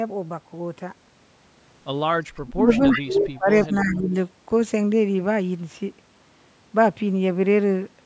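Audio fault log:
2.42–3.51 s and 3.67–4.15 s, speech suppressed in double talk. The speech sinks while the other side is also talking. In the first stretch it drops by as much as about 30 dB, over roughly a second in total. The second stretch is milder, dipping about 10 dB for around 0.4 s. The likely cause is an echo canceller that could not tell its own talker from the far-end echo and turned both down.
2.72–3.00 s, 3.63–3.76 s and 3.92–3.99 s, echo leak. A delayed copy of the speech comes back 319 ms after the original, in short scraps. The first scrap is about 10 dB under the speech, the second about 15 dB under, and the last about 20 dB under. The likely cause is a loudspeaker on one side whose echo canceller let part of the microphone pickup through and sent it back.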